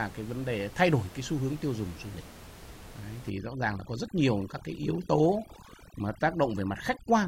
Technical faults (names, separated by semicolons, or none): overdone noise removal